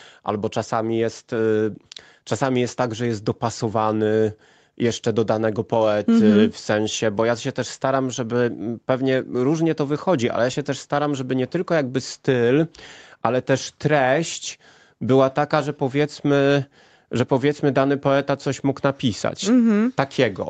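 Nothing here stands out as a fault, just speech carried over an ordinary call connection, with the top end stopping at about 8 kHz where the call's codec leaves it.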